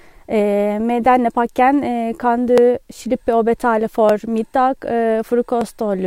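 From 1.06 to 5.61 s there's a regular click every 1.52 s in the speech, likely clock drift buffer slips between mismatched clocks dropping or repeating a few dozen samples.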